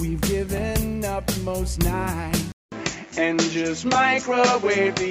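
At 2.52 s the input was likely switched to a poorer device: after a 200 ms silence, the sound loses everything above 7.6 kHz and turns duller through to the end, at about the same level, with a new background noise roughly 35 dB down.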